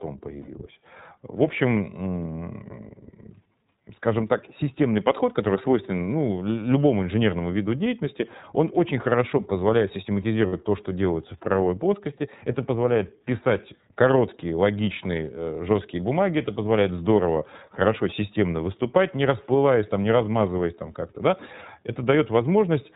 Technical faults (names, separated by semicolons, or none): iLBC codec; lost iLBC frames